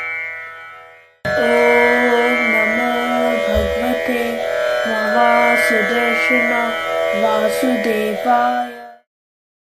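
Nothing goes wrong anywhere in this audio, and the only thing worth noticing is a smooth fade-out that begins around the 8-second mark and reaches silence at 9.08 s, just as an editor would shape an ending.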